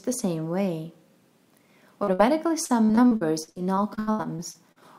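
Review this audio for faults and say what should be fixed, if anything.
Short concealed packet loss at 2.03 to 2.09 s: about 40 ms never arrived in time, and the receiver covered it by extending the preceding sound before blending back. It's heard as a brief smear. On a spectrogram, the harmonics run unnaturally flat across the gap, and the waveform shows a short, overly regular repeated cycle. A deeper jitter buffer would give late packets time to arrive.

Burst of packet loss at 2.13 to 2.21 s: about 60 ms in a row went missing, so the last sound was stretched and faded as a held buzz or hiss before the audio resumed further on. The spectrogram shows a smooth, decaying band with the original detail absent, and the waveform shows tapering amplitude then an abrupt restart. Forward error correction or packet redundancy would let the receiver rebuild a multi-packet burst.

Repeated packet loss (robotic sound) from 2.65 to 4.78 s: 15 separate gaps, the longest about 79 ms, total roughly 600 ms, so concealment fills about 28% of that stretch. 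The result is choppy, with pieces missing. The spectrogram looks striped, with repeated smeared or frozen blocks, and the waveform shows recurring looped or dipping segments. Fixing the unstable network path causing sustained loss, or moving to a more robust link, would prevent this.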